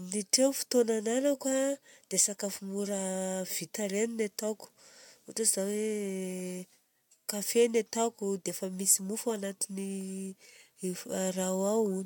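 No technical faults can be heard anywhere in this recording.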